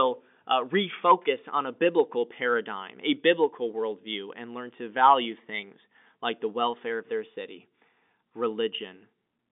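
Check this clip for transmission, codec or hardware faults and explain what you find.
No faults found.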